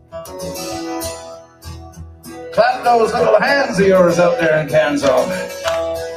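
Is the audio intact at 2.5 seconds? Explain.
No. A noise suppressor applied to music or sounds runs through the whole clip. It mistakes steady and fading parts for noise and pulls them down, so the level swings by around 15 dB and the sound pumps or thins out.

At 2.5 seconds the sound is also cut by the noise suppressor. From 1.15 to 2.57 s this sound is treated as noise and turned down, by about 16 dB at its deepest. Held parts sink and tails end early, while sudden attacks mostly get through.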